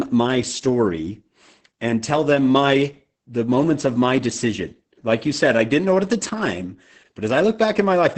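From start to finish, the speech carries heavy Opus voice compression. Nothing reaches above about 8.6 kHz, so the band is cut to wideband. The linear-prediction coder rebuilds the voice from a model plus a coarsely coded excitation. At this rate the excitation is starved of detail. That makes the speech sound muffled, hoarse and slightly robotic. The strength of the damage points to a bitrate near 10 kbps.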